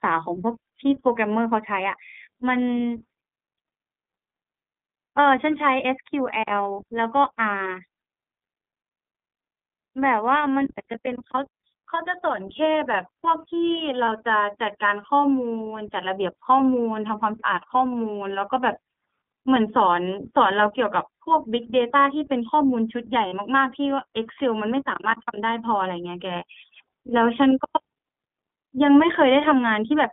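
iLBC codec, throughout the speech: the sound is squeezed into a telephone band of roughly 150 to 3500 Hz, leaving voices clear but slightly rough and synthetic. Each 20 ms frame is coded on its own, and the plainly audible grain fits a 15.2 kbps mode.

Lost iLBC frames, at 14.06 to 14.08 s and 23.28 to 23.34 s: the decoder filled each gap by repeating the last pitch cycle mixed with noise, heard as a brief held, buzzy vowel. The gaps fit one lost 20 ms frame and then two, and the voice recovers almost immediately.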